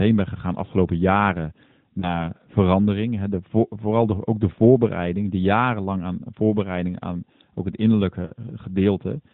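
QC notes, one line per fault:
2.0–2.29 s, lost AMR speech frames: right after "ben gegaan afgelopen jaren", a failed frame is patched from the previous pitch and vocal-tract settings, giving a brief dip and warble.
8.26–8.32 s, lost AMR speech frames: a short run, sounding like about 40 ms missing, is concealed with stretched, fading sound before the narrowband AMR audio resumes.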